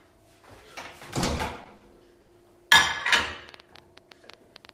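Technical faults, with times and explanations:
1.23–1.83 s, repeated stalls (stutter): the jitter buffer ran dry four times, and the receiver extended the last sound to fill about 100 ms in total, with the longest gap 40 ms. Nothing is lost, but the sound drags. Spectrograms show four short smeared, repeated slices.
2.21–2.30 s, short stall from a late packet: a packet arrived about 70 ms late, so the receiver held the preceding sound for 70 ms and then resumed where it left off. The waveform shows a stretched, periodic-looking segment, and the spectrogram shows a brief horizontal smear.
3.10–4.74 s, train of clicks: about 8.9 similar clicks per second at an uneven pace, peaking a few dB above the sound, likely from interference or a faulty connection. They show as sharp spikes on the waveform and thin vertical lines across the spectrogram.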